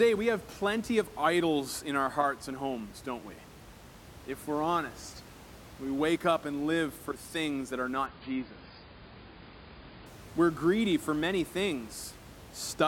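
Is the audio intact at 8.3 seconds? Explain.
No. At 8.3 seconds the stream is in a drop to a lower bitrate, running from 8.06 to 10.06 s, just after "for things that are". When the connection slowed, the adaptive player switched to a leaner encoding, which sounds like AAC falling from about 96 to 16 kbit/s. The treble is gone above 5 kHz, so the speech turns dull with added codec artefacts. The change is abrupt, with no gap in the audio.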